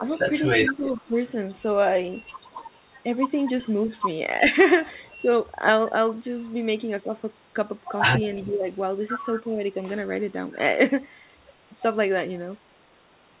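Speech over a narrowband call line with nothing above 4 kHz, where the echo canceller likely let loudspeaker pickup through (echo leak): a faint copy of the talker returns about 362 ms late, roughly 20 to 25 dB down, at 0.06–1.3 s, 3.6–3.7 s and 8.35–8.53 s. During double talk the canceller likely also pulled the wanted talker down (speech suppressed in double talk), producing dips of up to about 15 dB at 0–1.16 s, a slight dip at 5.19–5.26 s and deeper losses at 8.46–9.58 s.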